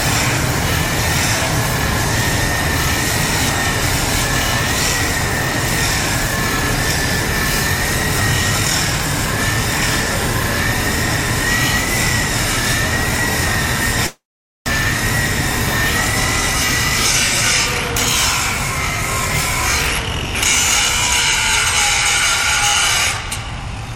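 At 14.06 s the sound does not simply stop. The last sound is stretched into a buzzy tail that fades, and silence follows until 14.70 s. This is most likely a long network dropout: packets stopped arriving, and the receiver covered the gap by repeating and fading what it last had. When audio returns, about 0.4 s of material is gone for good. The timing after the gap shifts by something like a fifth of a second.

From 23.17 s to the end at 23.95 s, the sound runs faster but keeps its pitch. This is a jitter buffer speed-up. Too much audio had piled up in the buffer, so the receiver trimmed tiny slices, each a pitch period or a few, many times in a row. Playback runs at about 109% speed. Roughly 70 ms is removed in all. The passage sounds hurried.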